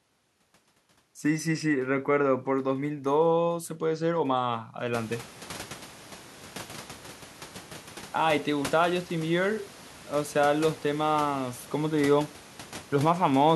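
No faults detected; the only change is room noise in the recording, which rises by about 22 dB around the five-second mark and then sits about 21 dB below the speech.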